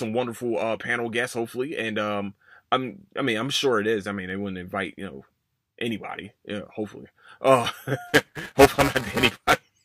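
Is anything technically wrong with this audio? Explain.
Yes, there are two faults in this speech.

At 4.30 s there is a single sharp click, likely dropped samples: a handful skipped, so the waveform jumps. Unlike tearing, it is one isolated event.

From 8.07 to 9.63 s, buffer tearing produces a steady robotic buzz at 345 Hz. About a tenth of each period replays audio some 5 ms old, which fits a 128-sample buffer.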